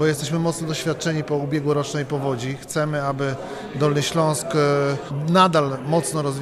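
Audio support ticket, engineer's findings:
No technical faults found: the signal holds steady throughout, with no audible defects on the playback path.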